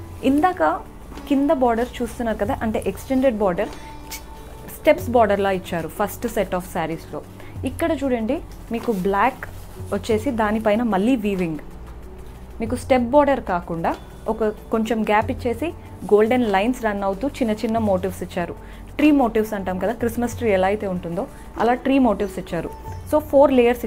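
No technical faults detected.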